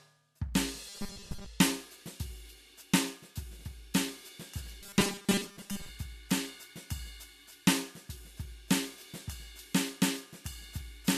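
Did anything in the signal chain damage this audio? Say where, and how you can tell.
Yes, there's robotic sound from repeated short buffers in the music at 0.89 to 1.46 s and again at 4.82 to 5.89 s. It's a rigid 200 Hz metallic buzz, likely the driver or buffer stage looping about 5 ms chunks while most of the real audio gets skipped.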